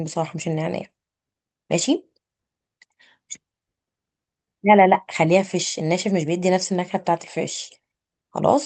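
Speech heard through a call codec whose high end stops around 8 kHz, as expected for such a link, with no technical fault anywhere in the recording.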